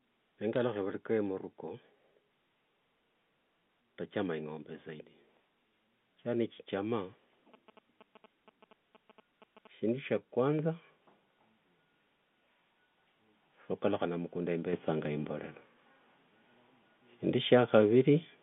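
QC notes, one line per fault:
0.53–0.61 s, bit errors on a digital phone line: a short cluster of sharp, isolated ticks over unaltered speech. On the G.711 A-law line each flipped bit corrupts a single 8-bit sample, and hits on the sign or upper bits throw that sample far from its neighbours, making a click. The error rate here is on the order of two in a thousand bits. Unlike GSM interference, the ticks follow no rhythm and carry no buzz.
7.54–9.89 s, GSM signalling bursts: a galloping dit-dit-dit of ticks and brief buzzes, about 20 dB below the speech. A nearby 2G handset transmitting short signalling bursts is rectified by the audio circuitry, so its TDMA framing becomes audible as a 217 Hz buzz. Its regular, repeating cadence and tonal buzz set it apart from the random single-sample clicks of line bit errors.
10.59 s and 14.73 s, microphone volume stepped up: two abrupt level jumps, about 5 dB and then about 6 dB, with voice and background rising together at the same instant. 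The call software judged the input too quiet and raised the device's input volume in one step each time. Because the room noise rises along with the speech and the level stays up afterwards, this is a gain change at the source, not a louder talker or a compressor recovering.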